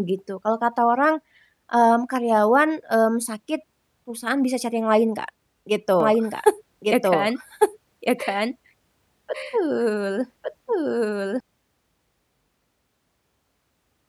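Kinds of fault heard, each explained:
Doubled audio track: from 6.0 to 11.4 s the speech repeats about a second behind at similar loudness, likely a second capture path or misaligned edit.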